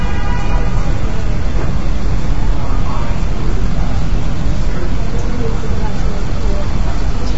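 Throughout, the sound is rough and grainy, with noise filling the gaps and nothing above 7.7 kHz. This points to low-delay AAC compression, likely AAC-ELD near 16 kbps.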